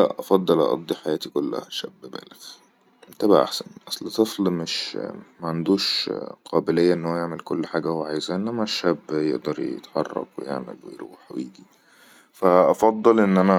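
Nothing stood out as a technical problem on listening to this speech recording.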